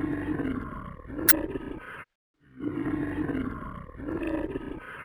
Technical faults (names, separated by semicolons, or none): damaged data in a compressed stream